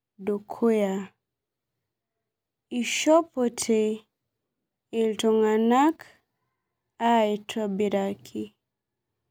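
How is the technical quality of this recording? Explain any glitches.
No glitches turn up anywhere in this speech recording, so there's really nothing to flag or explain.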